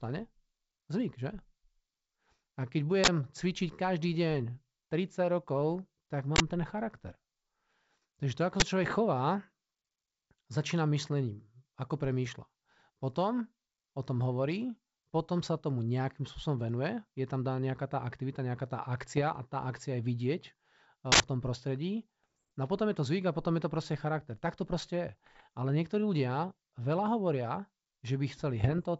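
Speech carried over G.722 wideband telephone coding, with clear bandwidth up to about 7 kHz and faint upper-band hiss consistent with the full 64 kbit/s mode, is hit by two separate kinds of fault. The first is an uninitialised buffer. Sharp, loud blocks of digital noise replace the audio at 3.04–3.08 s, at 6.36–6.40 s just before "ten charakter", at 8.60–8.62 s, and at 21.12–21.20 s. They last 40, 40, 20 and 80 ms, whole multiples of a 20 ms block. Stale memory was played out as if it were sound, so each burst starts and stops with hard edges and bears no relation to the speech around it. The second is bit errors on an ADPCM link, at 8.83–8.99 s, at 19.12–19.22 s just before "a tá akcia je", at 22.24–22.42 s right after "tom prostredí", at 25.26–25.43 s, and at 28.63–28.80 s. The error rate is only a fraction of a percent, but each flipped bit throws off the decoder's step size and predictor. 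Rather than a clean block of noise, these stretches sound like clustered pops and gritty roughness with the level briefly jumping, riding on top of the speech and settling as the decoder recovers.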